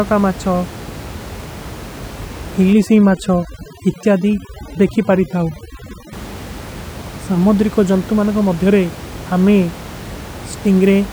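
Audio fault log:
2.73–6.13 s, overdone noise removal: background drops and breaks up into twinkling specks, from noise reduction set too strong.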